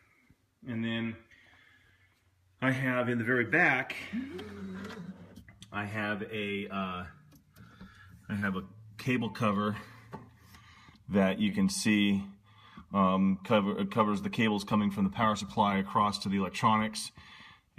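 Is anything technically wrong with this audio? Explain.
Yes. Two moments show short concealed packet loss, at 8.39 to 8.43 s and at 11.49 to 11.54 s. Each time, about 20 ms of audio arrived too late or not at all, and the receiver covered the gap by extending the preceding sound, repeating its pitch period if it was tonal or generating matched noise if not, before crossfading back into the real signal. Each dropout is heard as a brief smear or wobble, with a short transient possibly swallowed.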